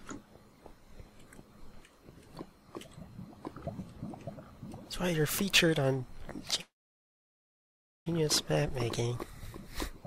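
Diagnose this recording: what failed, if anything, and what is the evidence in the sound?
At 6.61 s the sound stalls into a brief fading fill, then near-silence until 8.08 s: a call audio freeze, likely network delay draining the jitter buffer, with nothing actually lost.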